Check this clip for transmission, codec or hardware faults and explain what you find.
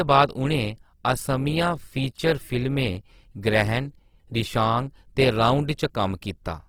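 The speech carries Opus compression across its whole length, likely from a low-rate encode in the music mode, which fits a bitrate near 16 kbps. Band energies are kept but filled with folded or noise content, so voiced sounds turn grainy and rough. It swirls less than MP3 would, and fullband response reaches about 20.2 kHz.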